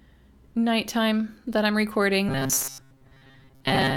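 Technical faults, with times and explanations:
2.29–3.96 s, robotic sound from repeated short buffers: the speech turns into a rigid metallic buzz at 134 Hz, likely from a 7.5 ms slice replayed while most real audio is skipped. Unlike distortion or a pitch shift, that buzz sits at a fixed rate.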